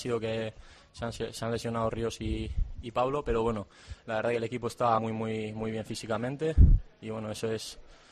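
At 4.97 to 4.99 s the audio lurches forward: compressed frames skipped. Roughly four frames of 23.2 ms each never reached the output, so about a tenth of a second of sound is simply absent. On a waveform the envelope jumps abruptly. On a spectrogram the patterns break and resume misaligned, with a broadband smudge at the seam.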